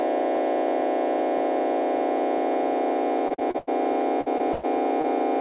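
From 3.28 to 3.69 s, packets went missing again and again: five gaps, the longest 90 ms, so nearly half of that stretch is patched by extending the previous sound. This repeated packet loss gives a choppy texture with pieces dropped.

At 4.21 to 4.28 s and again at 4.53 to 4.65 s, a burst of packet loss cut out runs of consecutive packets, about 40 ms and then 100 ms of audio. The receiver stretched the last sound, fading it as a held buzz or hiss, before jumping ahead past the lost material.

Short concealed packet loss occurs at 4.38 to 4.41 s and 5.01 to 5.06 s. About 20 ms failed to arrive in time each time, was filled by a brief continuation of the preceding sound, and was blended back, leaving a quick smear or wobble. Throughout, nothing reaches above 4 kHz, consistent with a narrowband G.711 A-law call path.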